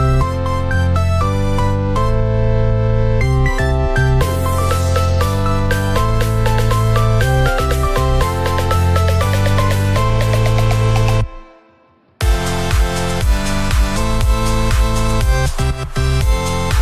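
No technical faults can be heard in the audio.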